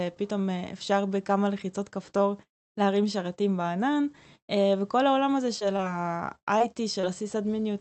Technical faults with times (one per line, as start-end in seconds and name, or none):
5.59-5.81 short concealed packet loss
6.39-6.62 short concealed packet loss
7.01-7.05 short concealed packet loss